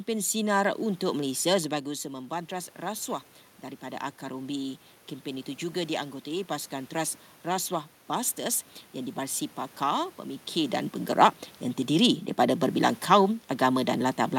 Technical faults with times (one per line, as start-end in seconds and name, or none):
3.61-6.99 automatic gain rising